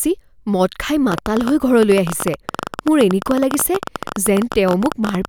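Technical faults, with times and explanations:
1.12–5.26 s, train of clicks: right after "মদ খাই" a run of roughly seventy sharp ticks starts, about fifteen a second at an uneven pace, peaking about 10 dB above the speech and carrying on through the pauses. That's likely interference from nearby gear or a faulty connection or power supply, injecting the same pulse again and again.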